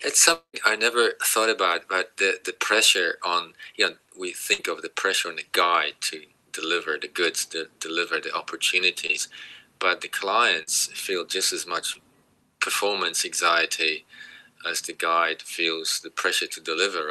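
Right at the start, from 0.33 to 0.55 s, the sound smears into a fading buzz or hiss that drops to near silence before resuming. That's likely a long network dropout, with about 200 ms lost. At 4.53 to 4.61 s there's a burst of packet loss: roughly 60 ms goes missing, patched with a held, fading tail before the audio jumps ahead. Later come three short concealed packet losses at 9.07, 10.63 and 11.93 s, each a brief smear or wobble where a few hundredths of a second were filled in by extrapolation. All of it runs through an Opus call path whose top end stops around 12 kHz.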